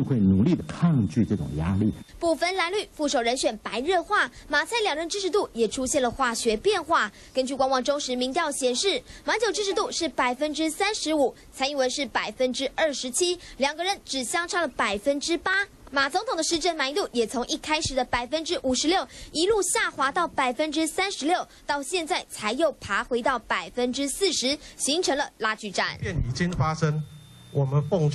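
Compressed frames skipped at 0.59 to 0.61 s and at 4.35 s: the decoder jumps past whole frames of about 23.2 ms, roughly four at first (about a tenth of a second) and then one.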